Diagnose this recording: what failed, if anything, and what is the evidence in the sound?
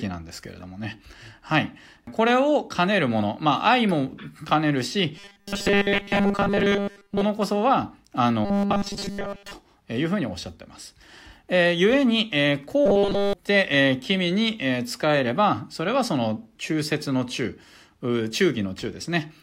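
Robotic sound from repeated short buffers at 5.17–7.22, 8.45–9.53 and 12.86–13.33 s. Speech becomes a rigid 200 Hz buzz. The likely cause is buffer starvation repeating 5 ms blocks.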